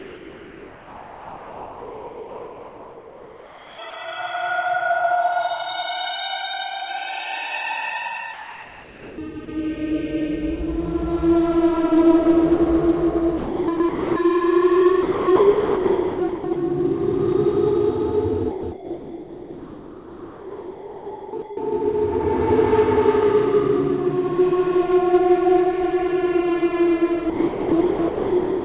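From 0.0 to 4.52 s, the real background gives way to steady, featureless noise. This is comfort noise in place of the background, likely from discontinuous transmission. At 3.90 to 3.93 s, sound dropped by the voice detector leaves a 30 ms gap of that noise, likely because the detector missed a quiet sound.

From 8.34 to 9.48 s, comfort noise in place of the background returns, likely for the same reason. At 9.45 to 9.48 s, sound is again briefly dropped by the voice detector, likely a missed quiet sound.

Sound chopped by the voice detector follows at 13.38 to 14.16 s, 15.03 to 16.56 s, 18.51 to 21.57 s and 27.30 s to the end. The detector likely switched on and off repeatedly. The sound turns choppy. Throughout, nothing is heard above 4 kHz.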